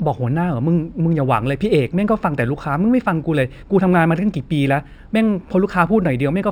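Throughout the speech there is imaging from linear upsampling: the rate was raised from 12 kHz to 44.1 kHz by straight-line interpolation, a weak filter. The top of the band sounds dulled, and a mirrored copy from 6 to 12 kHz, about 40 dB down, adds faint metallic shimmer to sibilants.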